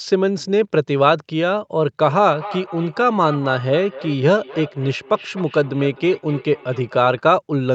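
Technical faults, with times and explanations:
2.01–7.27 s, feedback echo between two devices: speech comes round again roughly every third of a second, peaking about 16 dB down, as a second device replays it into the microphone.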